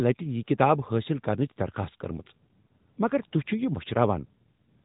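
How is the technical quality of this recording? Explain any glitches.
The recording has one fault, and it is present throughout: the speech has passed through the AMR narrowband mobile codec, and the damage is plainly audible.

From start to finish, nothing above 3.8 kHz survives. The codec rebuilds the voice from a vocal-tract model excited by sparse pulses in short frames, so the speech sounds thin, boxy and somewhat buzzy and synthetic. The degree of damage fits a high-rate mode of around 10 kbps. On a spectrogram, energy stops at a hard ceiling near 3.8 kHz, with blank space above it.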